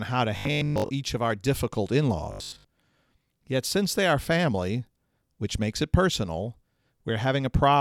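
From 0.37 to 0.90 s, between "how to" and "each of our difficult", a Bluetooth stutter sets in: late or missing packets leave the receiver replaying its last short slice, so about 0.43 s of audio is lost across half a second, in runs up to 0.12 s, a machine-gun buzz. A second burst follows "of our difficult in" at 2.32 to 2.65 s. A spectrogram shows repeated identical vertical slices; the waveform, periodic copies.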